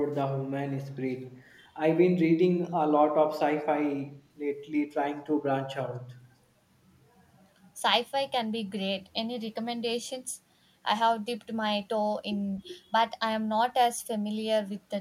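Echo leak at 0.14–0.21 s, 1.25–1.31 s and 1.47–1.58 s in this speech clip: very faint scraps of the voice return about 252 ms late, likely from a far-end echo canceller letting loudspeaker pickup through.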